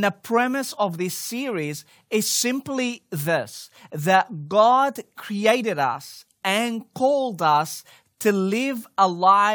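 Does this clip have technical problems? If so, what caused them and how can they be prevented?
No, there are no technical problems to point to in this speech recording. With nothing going wrong, there is no cause to trace and nothing that needs preventing.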